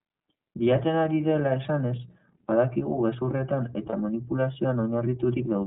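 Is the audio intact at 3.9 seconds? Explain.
No. From 3.89 to 3.94 s there are lost iLBC frames. About 30 ms is missing, which fits a single lost frame. The decoder fills the gap by repeating the last pitch cycle mixed with noise, so it sounds like a brief held, slightly buzzy vowel. A spectrogram shows a short stretch of smeared, repeated harmonic stripes, and clean speech resumes immediately afterwards.

That moment also carries the iLBC codec, which shapes the whole clip. Its narrowband, frame-by-frame coding, consistent with a 13.33 kbps mode using 30 ms frames, passes nothing above 4 kHz and adds plainly audible synthetic roughness. The spectrogram is empty above 4 kHz.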